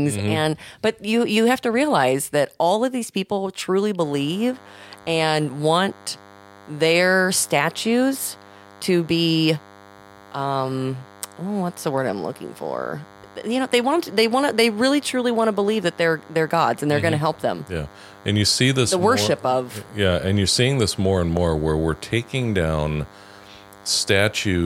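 A speech recording with DECT cordless phone buzz coming in at about 4.0 s and running right to the end: a thin, steady 100 Hz buzz full of harmonics, sitting roughly 25 dB under the speech, from a nearby DECT handset or base whose 10 ms radio bursts are being rectified in the audio circuit.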